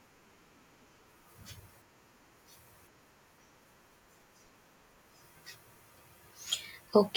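No technical faults occur at any point in the recording, so there is nothing to describe in time order.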